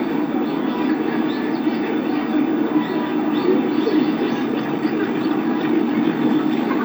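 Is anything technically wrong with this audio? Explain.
Yes. From 4.44 s to the end at 6.85 s there is a time-stretched section in which the sound plays about 1.84 times faster than before while its pitch stays the same. This was likely done by software squeezing the passage to fit a shorter length, holding pitch by cutting out short slices and joining what remains. The pace jumps abruptly at 4.44 s, and the rest sounds rushed.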